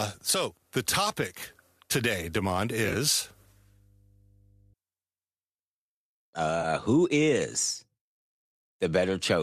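AAC frame loss with concealment appears from 2.85 to 2.96 s. About 50 ms of audio goes missing in short bursts scattered over 100 ms, with no single gap much beyond 20 ms. The decoder patches each hole from the last good spectrum, leaving a brief smeared, noisy patch.

Mains hum runs from 3.23 to 4.74 s. A steady 50 Hz tone, likely from a ground loop or a nearby transformer, sits roughly 35 dB below the speech as a faint low drone.

AAC frame loss with concealment returns from 6.62 to 6.65 s, just before "who is". This time about 20 ms is lost, which fits two short low-delay frames of the kind AAC-ELD uses. The rebuilt spectrum briefly leaves a phasey smear.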